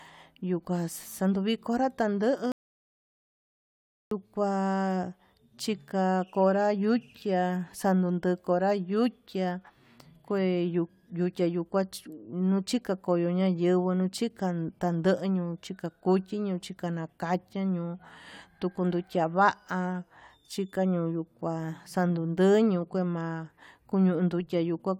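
At 2.52 s the speech stops abruptly and the track falls to silence until 4.11 s, an audio dropout to silence lasting about 1.59 s. There is no room tone or noise floor in the gap, so the input itself was lost rather than the talker pausing, most likely through a disconnected source, a broken link or a stray mute while recording carried on writing silence. Whatever was said in that interval is missing.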